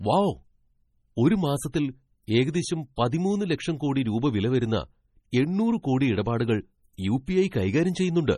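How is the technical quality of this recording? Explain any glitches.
The recording is heavily degraded by lossy coding, with three brief pre-echo glitches.

Throughout, the speech sounds watery and swirly with smeared attacks and nothing above 15.3 kHz, likely MP3 compression at a low bitrate near 32 kbps.

Pre-echo occurs at 1.72 s, 3.11 s (just before "ലക്ഷം കോടി രൂപ വില") and 6.97 s: quantisation noise spreads 14 to 19 ms ahead of sharp onsets, giving a short hiss before each attack.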